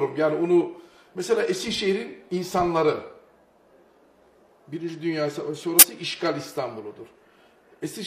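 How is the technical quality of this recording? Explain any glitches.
There's one clear glitch: at 5.79 to 5.86 s, a corrupt frame decoded. A handful of damaged compressed frames get played anyway, throwing energy onto wrong frequencies as a short, fairly loud chirpy burst.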